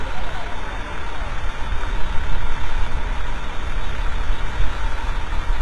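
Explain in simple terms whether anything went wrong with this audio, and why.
HE-AAC compression, throughout the whole clip: the treble sounds gritty and metallic, and nothing at all comes through above about 11.8 kHz. The likely cause is heavy HE-AAC coding. It keeps only the lower part of the sound properly and fakes the top end by copying lower bands upward and roughly reshaping them. That invented treble stays bright but doesn't match the real sound, so sharp, hissy parts turn rough and artificial.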